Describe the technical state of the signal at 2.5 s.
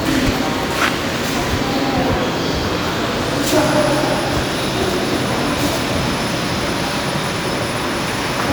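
At 2.5 s the signal is intact, with no audible fault in the sound at that moment.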